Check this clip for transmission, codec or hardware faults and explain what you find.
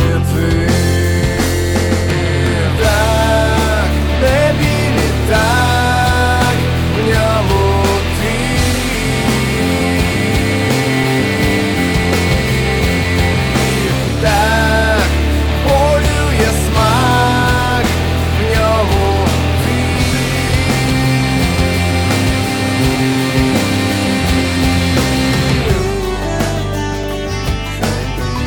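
One fault: periodic USB or driver dropouts from 1.01 s to 28.03 s, once every second. A blocked bus or driver replaces about 2 ms with silence each time, giving regular ticks.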